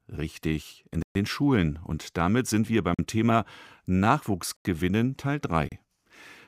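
The speech drops into blocks of digital silence at 1.02–1.15 s (128 ms), 2.94–2.99 s (43 ms), 4.57–4.65 s (85 ms) and 5.69–5.72 s (32 ms). Buffers likely went unfilled, and two gaps fit 2048- and 4096-sample blocks. Each cuts abruptly.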